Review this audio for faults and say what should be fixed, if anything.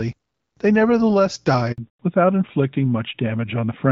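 A handover gap opens at 1.72 s: the call was passed from one network to another, and for 60 ms, until 1.78 s, no speech frames arrived at all. The speech fades out within a few tens of milliseconds and drops to silence until the new link begins delivering, so whatever was said in that window is simply gone. A make-before-break handover, with the target link established before the old one is released, would prevent it.

Immediately after, at 1.78 s, comes a fallback to narrowband: the call dropped from wideband AMR, sounding like the 12.65 kbit/s mode, to an older narrowband codec, most likely AMR-NB at around 12.2 kbit/s. From there to the end, nothing above 4 kHz survives. The clear, airy wideband quality of the first 1.7 s gives way to a duller, rougher, telephone-like sound. Ensuring the target network supports AMR-WB end to end would keep the call in HD Voice.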